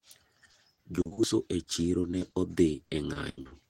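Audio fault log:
0.51–1.19 s: repeated packet loss (robotic sound). Six short holes, the longest about 40 ms, are patched by stretching the preceding sound. About 29% of the stretch is filler, so it turns choppy just before "uso e".
1.63–2.33 s: repeated packet loss, right after "uso e". Five holes of up to 20 ms cover about 14%, giving lighter choppiness.
2.85–3.53 s: repeated packet loss. Five holes of up to 80 ms cover about 35%, the most heavily patched stretch.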